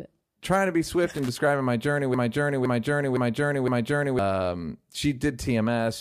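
From 1.16 to 1.29 s, loose connector crackle: an intermittent contact chops the speech into irregular scratchy bursts, seen as broadband vertical spikes and jagged waveform dropouts.

From 2.14 to 4.19 s, a broken-record loop: a 0.51 s fragment repeats four times back to back, likely from a stalled stream, with the spectrogram showing identical blocks tiling.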